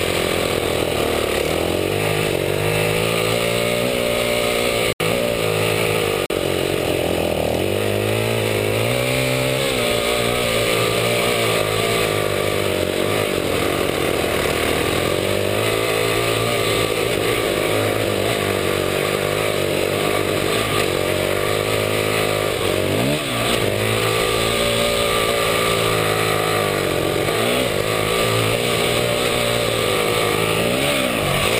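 At 4.93 s the output buffer was likely not filled in time, and a block of digital silence took its place: about 73 ms of silence that ends abruptly at 5.00 s, heard as a short hole. The same failure returns at 6.26 s, a 40 ms dropout lasting to 6.30 s, shorter. Neither gap is faded, so the audio snaps straight to silence and back.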